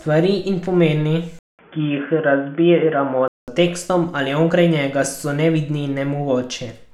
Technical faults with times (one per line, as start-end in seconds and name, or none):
1.39-3.48 input switched to a poorer device